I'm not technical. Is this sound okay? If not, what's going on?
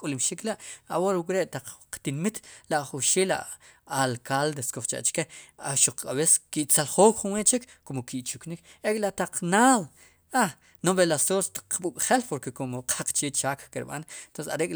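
Yes, this speech recording sounds fine. Nothing in it points to a technical problem.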